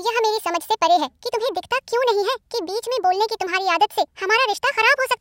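Speech runs at a wrong sample rate throughout: 1.5 times fast and 7 semitones high, consistent with 32 kHz audio played at 48 kHz. Unlike a pitch shift, tempo rises with pitch.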